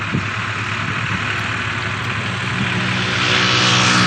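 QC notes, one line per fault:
Nothing stood out on listening.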